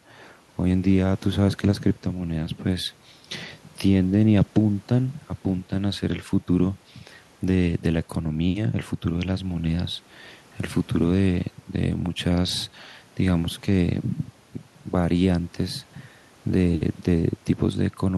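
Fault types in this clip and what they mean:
No fault types are present in this clip.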